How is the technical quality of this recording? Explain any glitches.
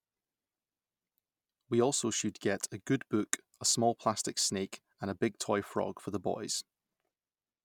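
The technical quality of this recording is good, and there are no glitches to explain.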